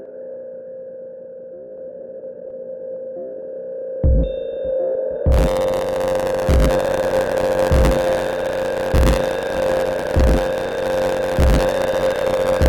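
From 5.31 s to the end, buffer tearing: the program writing the ring buffer and the hardware reading it cross every period, so about a tenth of each buffer replays sound roughly 30 ms old, hard-joined. A robotic buzz at 93.8 Hz results, fitting a 512-sample buffer.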